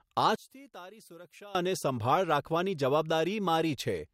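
From 0.36 to 1.55 s the speech collapses by about 20 dB, likely one channel inverted, so the shared centre cancels in mono, leaving a faint remnant.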